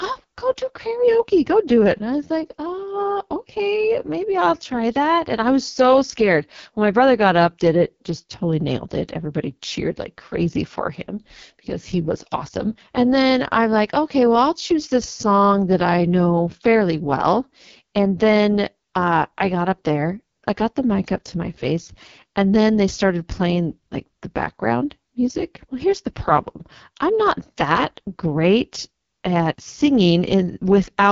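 AMR wideband (HD Voice) codec damage runs through the whole clip, from start to finish. The speech is rebuilt from a pulse-excited model of the vocal tract, and at this quality that model has so little detail to work with that the result is heavily damaged: rough and raspy, which fits the 6.6 kbit/s mode, the lowest the codec offers. Nothing is present above about 7.2 kHz, and the top band from 6.4 to 7 kHz is filled with shaped noise rather than the original sound.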